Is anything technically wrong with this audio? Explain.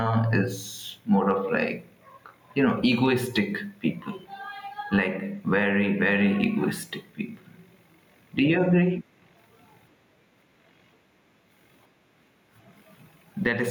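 Yes. Throughout the speech, the gain is pulled down on each loud sound, swinging by around 10 dB, so loud and soft parts sit closer in level and the sound is squashed. This is gain pumping, likely from gain set far too high with a fast limiter clamping every peak.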